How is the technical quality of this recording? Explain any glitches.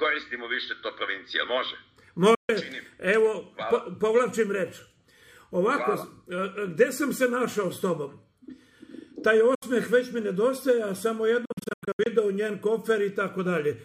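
The recording has three gaps where the audio drops out abruptly. At 2.35 s it goes silent for about 140 ms, at 9.55 s for about 70 ms, and from 11.45 to 12.07 s it stutters through a cluster of short holes, the longest about 90 ms. Each time the sound resumes further along, as if it had kept playing. This is likely a Bluetooth dropout: packets reached the headphones too late and were discarded.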